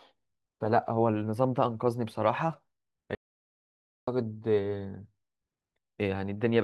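At 3.15 s the speech cuts off mid-flow and the track falls to silence until 4.07 s, so about 0.92 s of speech is simply missing. This is an audio dropout to silence, likely from the input being lost while the recorder kept writing silence. Unlike a natural pause or a noise gate closing, the gap holds no room tone or decaying tail, and the speech resumes abruptly rather than starting cleanly.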